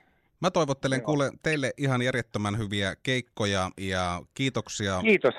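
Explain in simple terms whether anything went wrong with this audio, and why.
Corrupt frame decoded, at 1.52–1.57 s, just after "toivottelen kuule", and briefly at 4.55 s, after "järjettömän hyviä keikkoja ja". Damaged compressed data was played anyway, so sound briefly landed at wrong pitches, heard as a short chirpy blip, fainter the second time.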